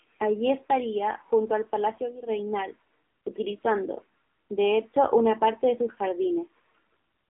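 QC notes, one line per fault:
throughout: AMR narrowband mobile codec. The speech is confined to a telephone band of roughly 300 Hz to 3.4 kHz, with nothing above 3.6 kHz, so it sounds boxed-in and thin. The codec rebuilds the voice from a vocal-tract model and a few pulses per frame, and at this low rate the result is plainly buzzy and synthetic, which fits a mode near 7.4 kbps. On a spectrogram, the energy stops at a flat ceiling near 3.6 kHz, and the harmonics look smeared and grainy.
1.51–2.42 s: loudspeaker feedback squeal. A pure tone at 5.3 kHz appears and swells over the first seven-tenths of a second, then holds a few dB above the speech until it stops at 2.42 s. A microphone is picking up its own loudspeaker, and the loop gain exceeds one at that frequency, so the tone feeds itself. Because the tone sits above the codec's cutoff, the loop likely formed after the phone path. On a spectrogram, it is a single bright horizontal line that brightens as it builds. 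On the waveform, it is a growing sinusoidal envelope over the speech.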